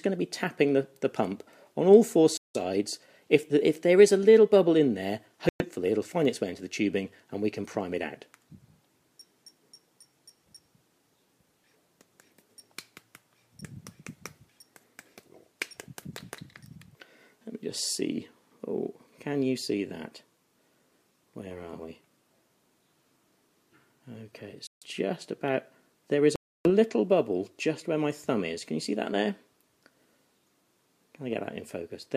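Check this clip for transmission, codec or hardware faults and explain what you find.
Four dropouts: the sound cuts to silence at 2.37, 5.49, 24.67 and 26.36 s for about 0.1 to 0.3 s, then resumes. It's likely a Bluetooth stall, with the receiver's buffer running dry while delayed packets were resent.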